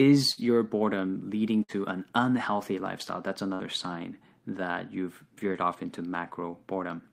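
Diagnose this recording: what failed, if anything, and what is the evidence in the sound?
Network burst of packet loss: the receiver concealed each gap at 0.31–0.40, 1.63–1.72 and 3.55–3.63 s with a fading held sound for about 55 ms, then resumed with roughly 60 ms of speech missing.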